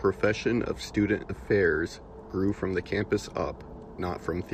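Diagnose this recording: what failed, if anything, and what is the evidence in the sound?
Nothing failed in this speech recording: every stage from capture to playback holds up, and there's nothing in the sound to point at.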